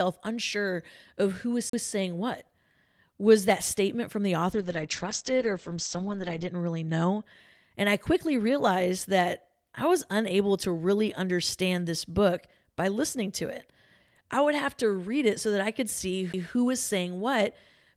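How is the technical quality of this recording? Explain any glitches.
The speech recording has two kinds of glitch. A CD skip at 1.69 to 1.73 s, after "unsure of who", and another at 16.33 s, between "so that I could" and "was saying": the laser jumped tracks, muting briefly (about 40 ms, then a few milliseconds) before playback resumed elsewhere on the spiral. A call bitrate drop from 4.54 to 7.29 s, after "that statement from the": the encoder fell from 40 to 10 kbps, with bandwidth shrinking from 20 kHz to 8 kHz for 1.93 s, so the sound turns coarse and muffled before recovering.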